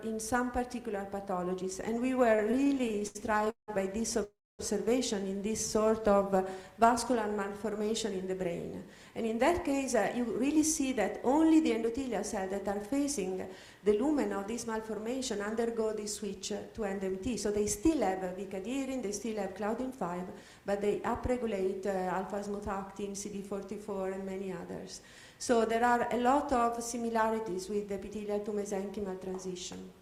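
From 2.35 to 3.70 s there are repeated stalls (stutter). Late packets starved the jitter buffer 17 times, and the receiver stretched the last sound to fill about 464 ms, with the longest hold at 177 ms. The audio drags and judders.

A call audio freeze follows at 4.24 to 4.61 s. For 350 ms the last sound is held and then decays, leaving about 250 ms of silence. The likely cause is delayed packets emptying the buffer.

From 5.67 to 7.83 s a jitter buffer slow-down repeats pitch periods, adding 201 ms. Playback runs at 91% speed with unchanged pitch, so sounds are drawn out.

A jitter buffer speed-up trims short pitch-period segments at 9.59 to 12.19 s and again at 16.08 to 18.32 s, each time at 108% speed and removing roughly 200 ms. A brief burst at 19.84 to 20.15 s runs at 112% and removes roughly 50 ms. In all three the audio sounds hurried at normal pitch.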